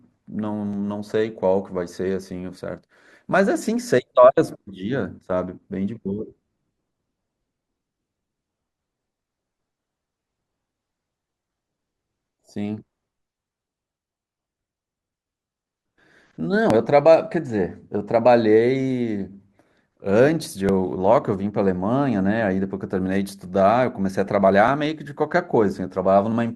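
An overlap between stream segments, spaced on 2-second boundaries, makes the player discard 5 to 15 milliseconds of speech, so the waveform jumps and brief skips sound at 0.73, 16.70, 20.69 and 24.68 s.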